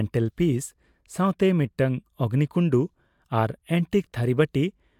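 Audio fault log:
No fault is audible anywhere in this speech recording. Nothing in the clip calls for an entry in the log.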